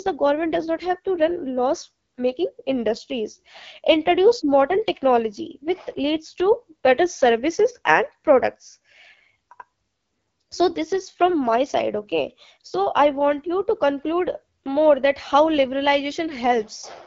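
Throughout, the speech sounds rough and raspy, with a buzzy, grainy edge and nothing above 7 kHz. The AMR wideband (HD Voice) codec is running near its lowest rate, which fits an 8.85 kbit/s mode, too few bits for its vocal tract model to capture the voice cleanly.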